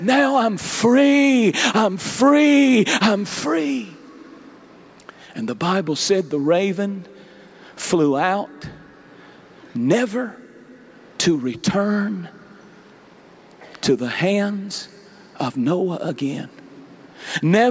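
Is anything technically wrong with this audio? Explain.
No, nothing technically wrong stood out on listening to this audio.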